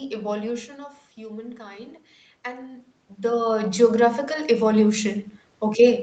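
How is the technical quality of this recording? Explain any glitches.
The recording has one gain fault. From 1.15 s to the end, automatic gain rising is audible. After the input falls by about 11 dB, the gain control slowly pushes its level back up. Voice and room noise swell together, which a talker moving closer would not cause.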